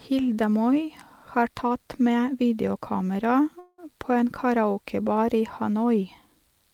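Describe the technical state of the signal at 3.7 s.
At 3.7 s you're in the middle of a call audio freeze, running from about 3.59 to 3.80 s, right after "tatt med videokamera" and just before "på en". The last bit of speech gets smeared into a short buzzy, fading hiss for roughly 190 ms, with no true silence. Likely cause: delayed packets let the jitter buffer run dry, so the receiver padded it out. Nothing's lost, but everything after lands about 190 ms late.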